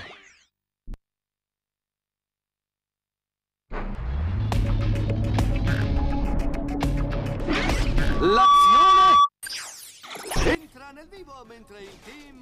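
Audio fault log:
8.10–9.29 s, loudspeaker feedback squeal: a 1.2 kHz tone swells within about half a second to roughly 10 dB above the sound as the microphone–speaker loop gain exceeds one.
10.55–12.41 s, one channel inverted: the level falls about 22 dB and centred content thins away, likely from one channel's reversed polarity cancelling shared material in mono.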